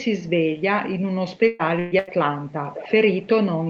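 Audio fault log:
1.47–1.62 s, 1.79–1.94 s and 1.99–2.10 s, burst of packet loss: the speech breaks three times, losing about 120 ms, 120 ms and 80 ms. Each gap is filled by stretching the last sound into a buzz or hiss that fades before speech resumes slightly further on. On a spectrogram each gap shows smeared, static harmonics that fade out. In the waveform, a repeating, decaying pattern ends in an abrupt join where the audio restarts.
2.69–2.93 s and 3.23–3.27 s, echo leak: a faint delayed copy of the speech trails the original by about 212 ms, likely sound from a loudspeaker that the far end's echo canceller did not fully remove. In the first stretch it sits roughly 15 dB down. The second is far quieter and only a brief trace. A spectrogram shows weak duplicate formant patterns shifted 212 ms right, and the waveform shows low-level ripples following the speech envelope.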